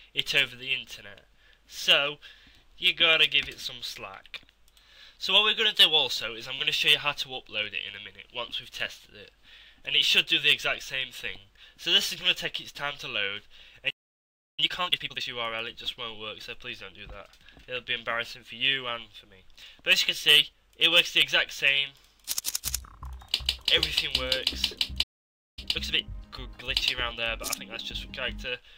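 At 13.90 s the sound cuts out for about 0.68 s, a playback stall, likely from the player running short of data or its thread being blocked. A second dropout of about 0.54 s starts at 25.02 s, again silent until output resumes.

Each stall is followed by time-compressed catch-up as the player trims its backlog by splicing out short pieces and cross-fading the rest. From 14.60 to 15.26 s the audio runs at twice normal speed. From 25.59 to 27.75 s it runs at 1.25 times. Pitch stays unchanged.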